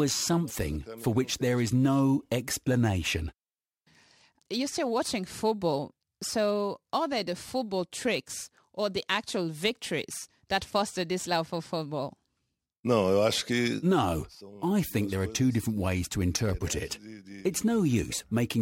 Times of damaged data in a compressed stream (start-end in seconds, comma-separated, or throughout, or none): none